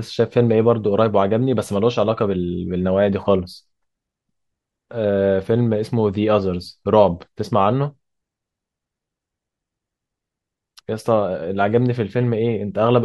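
No technical faults can be heard anywhere in the speech recording, and the signal stays steady and intact throughout.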